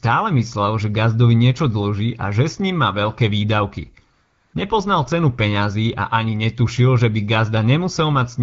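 After "ním má veľké výdavky", from 4.13 to 4.53 s, AMR comfort noise takes over for 0.4 s. The phone stopped sending speech frames and the receiver filled in a smooth synthetic hiss. Unlike a dropout, which falls to silence, the background is swapped for steady, even noise that switches in and out.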